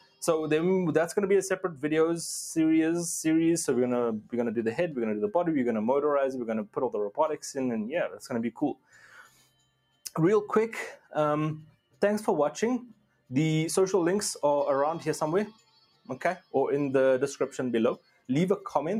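A noise suppressor applied to music or sounds runs throughout. It treats steady material as noise, so the level swings by about 10 dB. On the waveform the envelope pumps, and on the spectrogram sustained bands flicker.

Sound cut by the noise suppressor occurs at 0.0–0.23 s, 8.09–8.26 s, 8.54–10.04 s, 10.97–11.12 s, 11.66–12.02 s, 12.93–13.31 s, 15.52–16.09 s and 17.98–18.29 s. Held or decaying sound sinks by about 10 to 18 dB, deepest around 8.5–10 s and 12.9–13.3 s. Each drop looks like a dark hole in the spectrogram and a collapsed stretch of the waveform.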